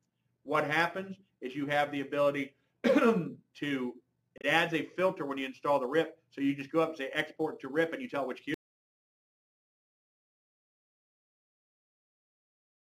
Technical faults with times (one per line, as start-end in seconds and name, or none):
4.38-4.45 damaged data in a compressed stream
8.54-12.84 audio dropout to silence